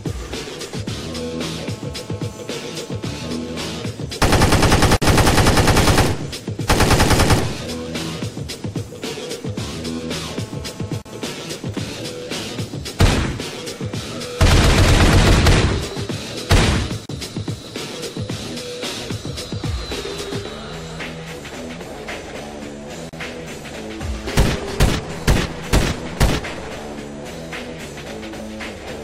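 From 1.18 to 3.83 s a GSM phone buzz sits under the sound at about 20 dB below it: a hard, raspy drone at 217 Hz, steady and unrelated to the audio. A nearby 2G handset on a call transmits in bursts 217 times per second, and the audio circuitry rectifies those radio pulses. On a spectrogram it appears as a comb of evenly spaced horizontal lines at 217 Hz and its many harmonics. The waveform shows a regular pulse train.

At 4.97 to 5.02 s a gap at a join of encoded pieces opens: about 52 ms of dropout in continuous sound, after which the audio resumes where it left off. Separately encoded segments were joined without trimming, so one encoder's leading delay and the other's padded final frame both remain. The waveform shows a short notch with softened edges, and the spectrogram shows a thin vertical blank stripe. The same fault recurs every 6 s, at 11.02, 17.06 and 23.09 s, each about 37 ms long.

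The phone buzz returns from 10.28 to 11.30 s at the same level and pattern. It overlaps the 11.02 s join gap.

From 11.41 to 12.59 s the interference changes to GSM signalling bursts, much quieter at roughly 35 dB below the sound. This matches a handset in a call whose user has gone silent: it transmits only sparse groups of bursts, heard as even ticks with a longer 217 Hz buzz twice a second. On a spectrogram these show as short, regularly spaced vertical clusters of harmonic lines rather than a continuous comb.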